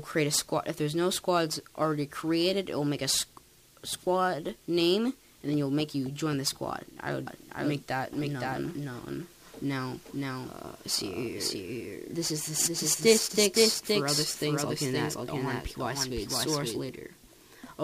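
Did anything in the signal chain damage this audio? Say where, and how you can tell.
Yes. From 7.27 s to 16.79 s the audio carries a doubled audio track, most likely from the signal being captured a second time through a slower path, or from an edit that left two misaligned copies in the mix. A second full-band copy trails the original by roughly half a second at about the same level, so every event repeats as a distinct, dry echo with no decay or room colour. It cuts in abruptly at 7.27 s and drops out just as abruptly at 16.79 s.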